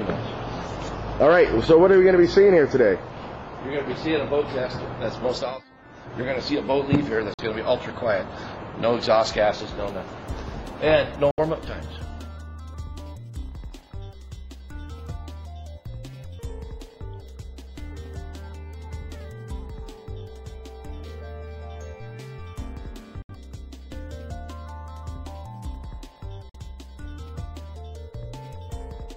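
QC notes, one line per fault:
7.34–7.41 s, 11.31–11.40 s, 23.22–23.31 s, 26.49–26.56 s: Bluetooth dropout, likely. Sound cuts to silence for 64–90 ms, then resumes further along as if it had played on, fitting two or three lost packets. The waveform shows flat, sharp-edged gaps, and the spectrogram shows blank full-band vertical stripes.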